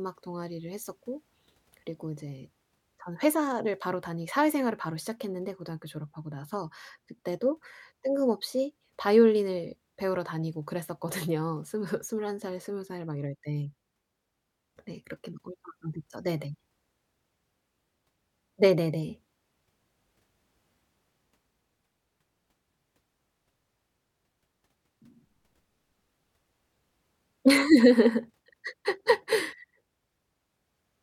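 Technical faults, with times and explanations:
Nothing technical stands out here: this speech recording carries on without any problem worth pointing to.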